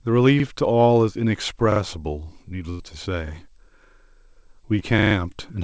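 At 0.40 s there's a repeated buffer: fresh audio didn't turn up in time, so the device replayed the last chunk, which fits a 40 ms buffer. One extra pass gives a quick stutter with a hard join. It happens again at 1.72 s with two extra plays, a slightly longer hiccup, and nothing actually goes missing. Around 2.70 to 2.81 s a burst of packet loss knocks out roughly 100 ms. The receiver stretches the last sound and fades it, so you hear a held buzz or fading hiss before it jumps ahead with that stretch gone. At 4.79 s a short concealed packet loss drops about 20 ms, patched over as a brief smear or wobble. Right after, from 4.99 to 5.15 s, the same 40 ms buffer repeats four extra times, making a rapid stutter. All of this sits on a G.722 call path that has nothing above 8 kHz.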